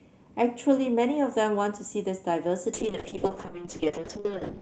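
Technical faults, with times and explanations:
2.75 to 4.61 s, call bitrate drop: from this point to the end the speech turns rough and watery and loses its top end. The encoder is coding far more coarsely and trimming high frequencies, which fits a fall from 32 kbps to roughly 6 kbps.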